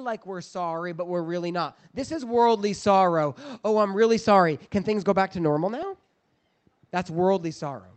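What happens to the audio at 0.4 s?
At 0.4 s you're in the middle of an automatic gain rising stretch, running from about 0.24 to 1.26 s. The gain control judged the input too quiet and eased its gain up by about 4 dB, so the speech and the background noise swell together.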